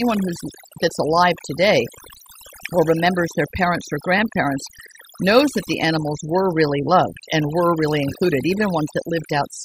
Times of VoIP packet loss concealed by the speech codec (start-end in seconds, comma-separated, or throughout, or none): none